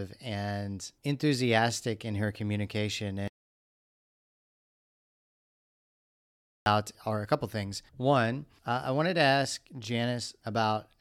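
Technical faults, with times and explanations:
3.28–6.66 s, audio dropout to silence: speech cuts abruptly into dead digital silence with no room tone, unlike a gate's fade, likely from lost input.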